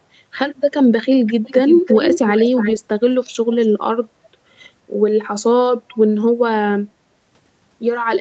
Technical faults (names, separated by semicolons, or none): speech suppressed in double talk; echo leak